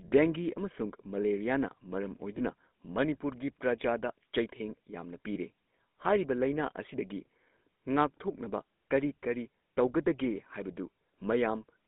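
Across the whole recording the speech carries the buzzy, gravelly roughness of the GSM full-rate codec, plainly audible and consistent with its 13 kbps rate. The codec rebuilds the voice from a vocal-tract model excited by sparse, regularly spaced pulses, so fine harmonic detail is lost and replaced by a coarse grain. On a spectrogram the energy sits between about 200 Hz and 3.6 kHz, with nothing above, and the harmonics look smeared and noisy.

Lost GSM frames interrupt the speech at 2.38 to 2.41 s and at 5.34 to 5.38 s, each a single dropped 20 ms frame. Both times the decoder repeated the previous good frame's settings, so the sound briefly holds on a rough, metallic ring. Each gap is too short to fade to silence. In the waveform each shows as a brief stretch of repeated texture, and on the spectrogram as a short, smeared vertical band.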